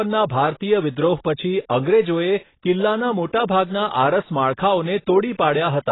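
Speech, band-limited throughout with nothing above 3.9 kHz, sounding dull and smeared, with a warbling, fizzy texture on sustained sounds and sibilants. The likely cause is heavy AAC compression, where AAC-LC starves the spectrum of bits, which fits a bitrate of about 16 kbps.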